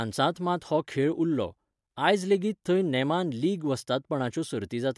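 No technical faults can be heard anywhere in the recording.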